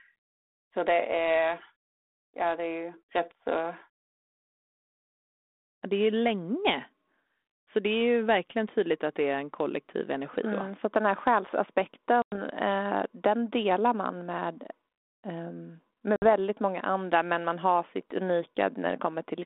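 At 12.22 s and 16.16 s, packet loss on an ADPCM call leaves sudden silent gaps of 100 ms and 60 ms: flat lines in the waveform, blank columns on a spectrogram. With the decoder's predictor out of step, "eh den delar man" and "många andra men man" return slightly distorted.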